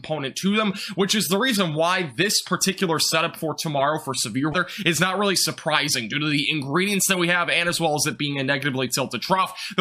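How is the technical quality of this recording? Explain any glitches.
One glitch stands out, at 4.51 to 4.55 s. It is damaged data in a compressed stream: corrupted bytes make the decoder misread frames and lose sync, producing a brief glitch about 40 ms long, heard as a chirp, squawk, click or short hole. Unlike a plain dropout or click, the decoder loses sync and must search for the next frame header before playback resumes.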